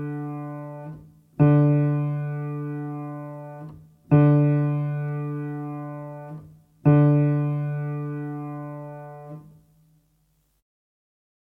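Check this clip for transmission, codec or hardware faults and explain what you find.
No transmission, codec or hardware faults.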